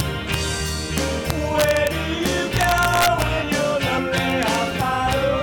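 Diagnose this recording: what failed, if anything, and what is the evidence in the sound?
Throughout the clip the loudest peaks break into violent, sharp cracks, much harsher than the flattened edge of ordinary clipping. This is integer overflow at a gain or sample-format conversion stage. The signal is driven about 2 dB past the top of the integer range, and instead of being limited, each over-range sample wraps around to the opposite extreme. Only a small fraction of samples exceed the limit, so the cracks land on the loudest moments rather than sounding continuously.

At 3.97 s the audio jumps abruptly forward, marked by a brief smeared blip rather than a hard click. This is compressed frames skipped, a fault at the codec or storage stage. Frames were either missing from the file or rejected by the decoder as damaged, so playback resumes further along. The jump is roughly a third of a second, which fits about fifteen 23.2 ms frames. 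Overlap between neighbouring frames blurs the join into that short smear.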